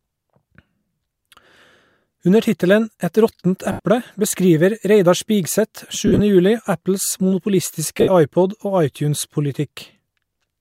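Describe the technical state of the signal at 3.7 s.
At 3.72 to 3.80 s, about 75 ms of lost LE Audio frames, which fits ten 7.5 ms frames, occurs. The LC3 decoder conceals the gap by repeating the last spectrum with randomised signs and then fading it, so the speech smears into noise before dropping away.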